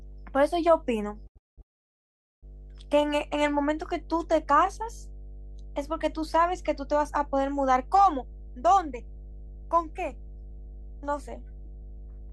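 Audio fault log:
throughout mains hum: a ground loop or nearby transformer couples the 50 Hz power line into the signal, giving a steady low tone at about 10 dB below the speech.
1.27–1.38 s short stall from a late packet: the jitter buffer ran dry for 82 ms, so the receiver held the last sound until the packet arrived, nothing lost.
1.38–1.60 s and 1.62–2.45 s call audio freeze: packets were likely held up in transit, emptying the buffer; the last sound fades to near silence for 200 ms, then 810 ms.
8.24–12.29 s jitter buffer speed-up: the buffer held excess audio, as after delayed packets arrive together, so short pitch-period pieces were cut, about 150 ms in all; speech runs 4% fast at unchanged pitch.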